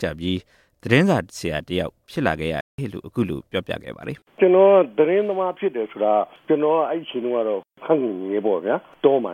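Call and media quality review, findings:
Playback stall, 2.61 to 2.78 s: the sound halts mid-flow into silence for about 180 ms, then resumes. Likely cause is the player's buffer running dry or its output thread being blocked. Unlike a click-length dropout, the silence lasts long enough to hear as a pause.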